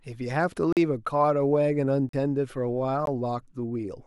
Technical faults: block of digital silence

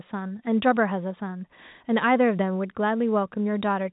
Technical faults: none

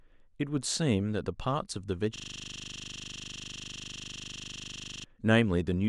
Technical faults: system hang loop

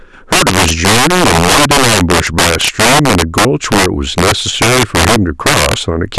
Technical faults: integer overflow

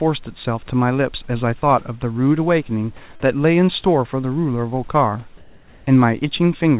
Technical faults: comfort noise in place of the background

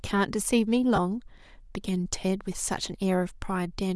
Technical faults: Bluetooth LC3 compression; lost LE Audio frames

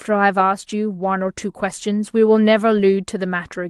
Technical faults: lost packet rebuilt from error correction

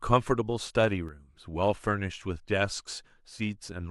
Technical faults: one channel drops out

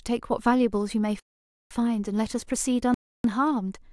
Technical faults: block of digital silence

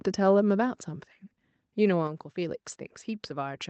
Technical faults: microphone volume stepped down

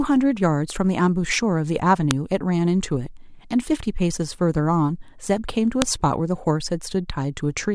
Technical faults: file header played as audio

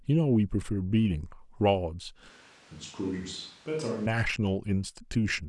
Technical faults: switch to a distant microphone

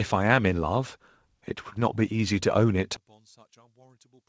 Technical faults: short concealed packet loss; one channel inverted

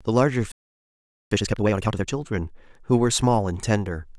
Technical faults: playback stall; time-compressed catch-up

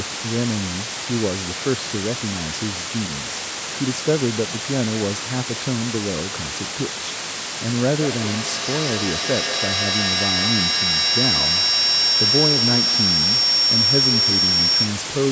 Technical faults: low bit depth with dither; feedback howl

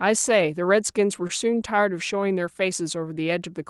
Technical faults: short stall from a late packet

